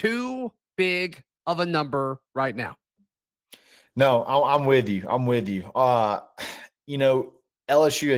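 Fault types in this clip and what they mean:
Opus voice compression: the speech sounds like Opus in its hybrid mode, with linear-prediction coding below 8 kHz and a thin transform layer above. The damage is plainly audible, a hoarse, slightly robotic grain all the way through, which fits a bitrate around 16 kbps.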